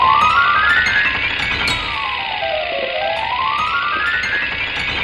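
No technical faults can be heard anywhere in this audio.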